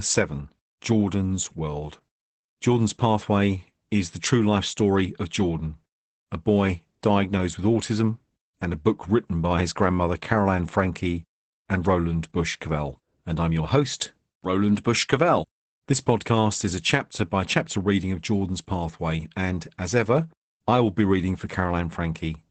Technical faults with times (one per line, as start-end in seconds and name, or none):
0.00-22.50 Opus voice compression